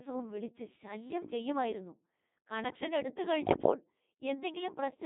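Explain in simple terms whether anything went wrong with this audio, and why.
Codec 2 vocoder, throughout: the whole clip has passed through Codec 2, a digital radio system that doesn't send the real sound of the speech. It sends only a rough summary: how high the voice is, how loud, and its general tone. The receiver then rebuilds a voice from simple tones. The result is heavily damaged, robotic and buzzy. It is also squeezed into a narrow range of roughly 200 Hz to 3.6 kHz, so it sounds thin, like a radio handset.

Bit errors on digital voice radio, from about 3.46 to 3.74 s: for roughly a quarter of a second, part of the incoming signal arrived scrambled, which is typical of a weak radio link at the edge of coverage. Because so little data carries the speech, each corrupted piece throws off the pitch, loudness or tone of a whole short slice of sound. In that stretch the synthetic voice lurches and warbles, breaking into bleeps and garbled robotic noise.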